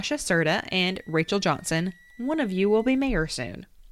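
Speech with a switching supply whistle from 0.59 to 2.98 s: a high tone moving between 1.5 and 2 kHz, roughly 30 dB below the speech, from a switching power supply running in audible burst mode or beating with another one.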